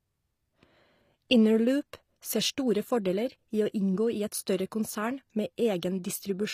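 Throughout the speech the upper spectrum has likely been rebuilt by HE-AAC compression rather than coded directly. Treble above the crossover is synthesised from copied lower bands under a coarse envelope, which fits a rate around 24 kbps. The damage is plainly audible: the top end stays bright but its harmonics fail to align with the lower band, so s sounds come out gritty and metallic, and nothing survives above 15.5 kHz.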